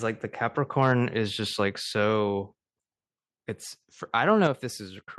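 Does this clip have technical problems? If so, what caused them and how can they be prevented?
Yes. From 0.81 to 0.92 s there is microphone overload. The speech turns harsh and crackly for that short stretch. The peaks run about 2 dB past full scale, so their tops are flattened. Only a small share of the samples is affected. The likely cause is an input volume set too high, which drives the loudest syllables into the converter's limit. To prevent it, lower the microphone input level so that peaks stay below full scale.

At 2.70 s and again at 4.47 s the microphone volume is stepped down. The speech and the background both drop suddenly, by about 2 dB and then by about 5 dB. Each drop is a single step, not a gradual fade. The likely cause is call software that judged the microphone too loud or clipping and cut the device's input volume. To prevent it, set a sensible input level beforehand and turn off automatic microphone volume adjustment.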